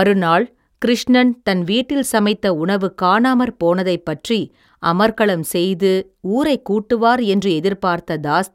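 No technical faults are audible.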